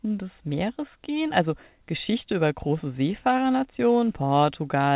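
Listening through this speech clip, which comes over a call path whose band stops at about 4 kHz, nothing stood out as a technical problem.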